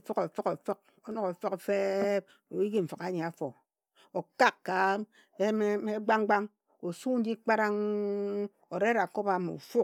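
No technical faults can be heard anywhere in the recording.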